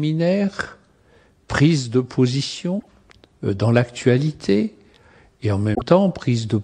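From 2.76 to 2.87 s, and again from 5.74 to 5.82 s, there's damaged data in the compressed stream. The decoder runs into corrupted frames, loses sync and hunts for the next good frame header, so the audio briefly breaks up each time.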